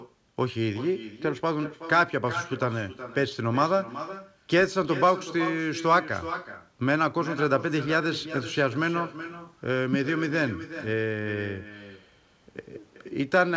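From start to finish, every phrase of the speech is trailed by a quieter and thinner copy of itself, arriving roughly 0.4 s later at about 13 dB below the original. This is echo with no canceller: the far end played the call through a loudspeaker, its microphone captured that playback, and nothing subtracted it before sending it back across the network. The band-limited sound, with nothing above 8 kHz, fits a G.722 call path.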